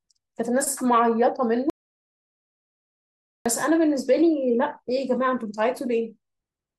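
At 1.70 s the speech cuts off abruptly and the track falls to silence until 3.46 s, when it resumes mid-flow. This is an audio dropout to silence: roughly 1.76 s of signal is missing, with no room tone or noise floor in the gap, so whatever was spoken there is unrecoverable. The likely cause is a momentary loss of the input, such as a disconnected device, failed link or accidental mute, while the recorder kept writing silence.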